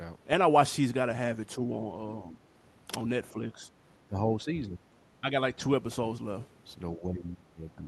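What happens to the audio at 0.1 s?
Nothing goes wrong at 0.1 s: the speech is intact there, passing through the call path as usual with no dropout, glitch or other fault at that moment.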